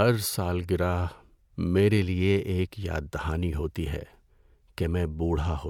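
Speech, with nothing technically wrong with it.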